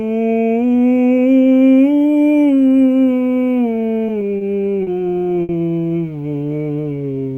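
Three short stalls from a late packet land close together in this music: 4.38 to 4.43 s, 4.83 to 4.89 s, and 5.43 to 5.51 s. Each time the next packet didn't turn up on schedule, the jitter buffer ran dry and the receiver held the last bit of sound for 30, 40, then 60 ms before carrying on where it left off. Nothing gets skipped. You just hear brief, slightly buzzy hangs, and the playback ends up running that much later after each one.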